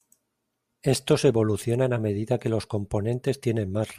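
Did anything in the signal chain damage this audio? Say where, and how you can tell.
No, nothing in the signal chain audibly damaged this speech.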